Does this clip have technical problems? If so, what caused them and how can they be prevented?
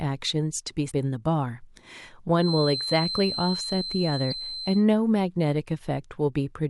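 Yes. Two kinds of fault can be heard in this speech.

The first is damaged data in a compressed stream. A short glitch lands at 0.9 s, and a longer blip runs from 4.29 to 4.33 s. In each spot, some bytes of the encoded stream were corrupted. The decoder could not read those frames, lost its place, and skipped ahead to the next valid frame header. To prevent it, deliver the file over a checked, reliable path and verify its integrity before decoding.

The second is a feedback whistle. A thin, steady tone near 4.1 kHz sits behind the speech from 2.33 to 4.86 s. It stays roughly 10 dB under the sound and swells and fades slowly in level. It overlaps the second glitch. The likely cause is a loudspeaker-to-microphone loop running just below the point of runaway feedback. One frequency keeps ringing without building further. To prevent it, lower monitor gain, move the microphone away from speakers, or notch out 4.1 kHz.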